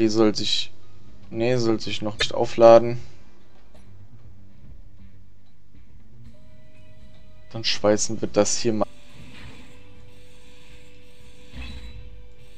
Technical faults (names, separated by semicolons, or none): damaged data in a compressed stream